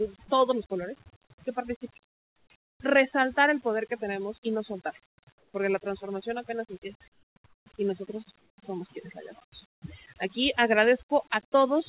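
Throughout the speech, overdone noise removal is audible. Bands near the estimated noise floor are pulled down hard, so the background drops and breaks up into twinkling specks, and the G.711 mu-law call path band-limits the voice to nothing above 4 kHz.

In the pauses, comfort noise replaces the background at 2.06–2.5 s, 2.64–2.8 s, 5.06–5.18 s after "tenemos y no soltarlo", 5.38–5.54 s before "la transformación apenas empieza", 7.12–7.36 s, 7.46–7.66 s, 8.38–8.58 s, and 9.7–9.82 s after "somos quienes la llevamos". The real ambience gives way to steady, featureless noise, about 4 to 22 dB quieter. The likely cause is discontinuous transmission halting the stream during pauses while the receiver synthesises fill noise.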